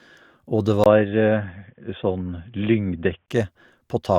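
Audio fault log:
0.84–3.28 s, input switched to a poorer device: sound turns dull and boxy after a 20 ms waveform gap, likely a narrower-band input. The spectrogram is empty above 3.5 kHz, with faint new noise and unchanged level.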